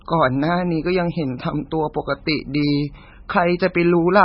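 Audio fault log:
Throughout, MP3 compression. The speech has nothing above 5.5 kHz, so it sounds dull. Weak frequency lines flicker on and off between frames, giving heavy watery swirl, chirpy s sounds and smeared onsets. The likely cause is a starved encoder near 16 kbps.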